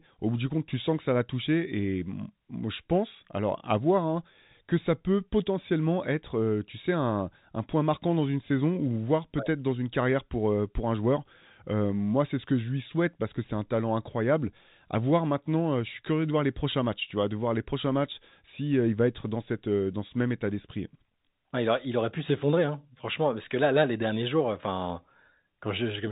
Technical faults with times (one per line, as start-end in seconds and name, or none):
none